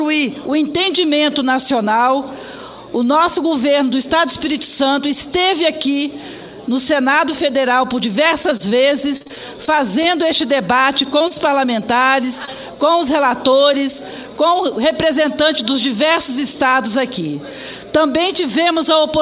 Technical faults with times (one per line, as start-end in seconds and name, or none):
8.36-8.80 repeated packet loss (robotic sound)
9.16-10.06 repeated packet loss (robotic sound)
11.18-11.22 short concealed packet loss
11.28-11.32 short stall from a late packet
12.45-12.49 short concealed packet loss